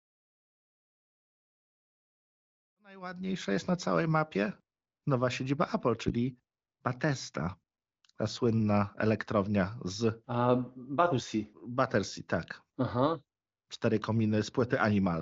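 The speech comes through an AMR wideband (HD Voice) path at 23.05 kbit/s, so nothing sounds above about 7.5 kHz, and the level rises in a smooth editor's fade-in from around 3 s that reaches full level at 3.77 s.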